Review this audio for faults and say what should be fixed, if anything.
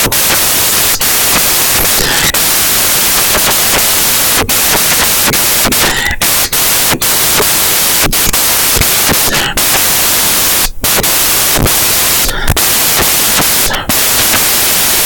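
Samples built from the wrong bytes, throughout the clip. The fast-changing low bits become each sample's large part, giving loud, harsh broadband noise, close to white on loud sounds. Fix the reader so its byte order, offset and sample alignment match how the file was written.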